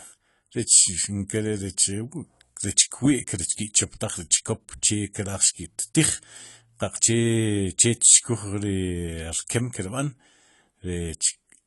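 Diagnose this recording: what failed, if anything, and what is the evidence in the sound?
The failure sits at the codec stage, and it runs through the whole speech recording: the top end stops dead at about 11.5 kHz, and compression damage is plainly audible, with a dull, smeared quality and a fizzy edge on sibilants. The likely cause is AAC compression at a low bitrate, which fits roughly 32 kbps AAC-LC. Too few bits forced a lowered cut-off and coarse quantisation. A plain low-pass filter or a reduced sample rate would remove the top just as cleanly but leave no smearing or fizz below it.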